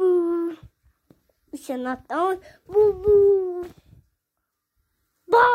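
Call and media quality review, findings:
No audible defects found across the clip; nothing to escalate.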